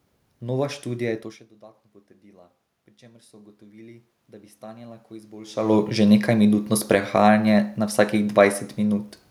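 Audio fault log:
1.06–5.62 s, automatic gain rising: the voice drops about 24 dB near 1 s, so gain climbs about 11 dB, slowly swelling voice and room noise together.
5.68–9.09 s, automatic gain falling: the talker moves around 5.5 s, then gain eases down about 4 dB, sinking voice and background together.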